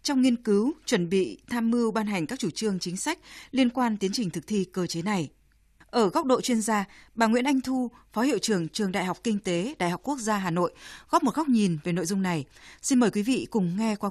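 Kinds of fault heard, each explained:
No technical faults can be heard anywhere in this recording.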